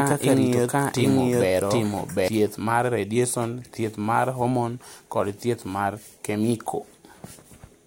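A second, slower capture path likely fed the same speech into the mix, producing a doubled audio track. From the opening until 2.28 s, just before "mar radiason thieth mar", an equally loud, dry copy trails roughly 0.7 s behind, then cuts off abruptly after "kaka rito".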